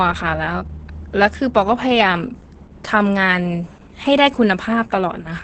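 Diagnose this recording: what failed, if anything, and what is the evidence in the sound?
Opus voice compression runs throughout the speech, a fault at the codec stage. Nothing remains above about 8.6 kHz, which fits Opus running in wideband SILK mode, and the damage is heavy: the voice sounds muffled, hoarse and slightly robotic. The SILK coder models speech as a linear-prediction filter driven by a coarsely quantised excitation, updated in 20 ms frames. The sound points to a bitrate near 10 kbps, which is too few bits to carry that excitation faithfully.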